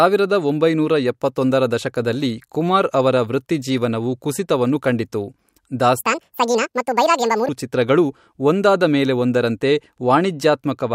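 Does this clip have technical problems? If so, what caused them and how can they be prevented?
Yes. A section at the wrong speed runs from 6.02 to 7.49 s: the speech plays 1.82 times too fast, hurried and about ten semitones higher, likely from being clocked at the wrong rate. Keep playback and editing sample rates matched to the recording's rate so no segment gets resampled or played at the wrong clock.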